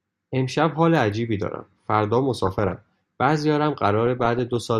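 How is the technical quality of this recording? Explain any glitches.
Weak DAB reception corrupts the recording twice, from 2.37 to 2.78 s and from 4.07 to 4.57 s, producing DAB burbling. Bit errors, around a few tenths of a percent, slip past error correction into the MP2 data, so damaged samples put short blips of noise in single sub-bands and damaged scale factors make sub-bands jump in level for up to a frame. Over the speech this sounds like burbling blips of noise, the bursts lasting about 0.4 and 0.5 seconds.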